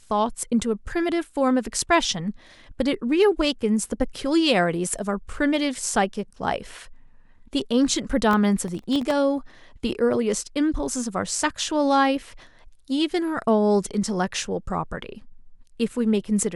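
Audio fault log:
8.31–9.11 s processor overload crackle: a gritty crackling burst over the speech, from around fifteen sub-millisecond buffers missing their deadlines and dropping out as hard-edged silent gaps.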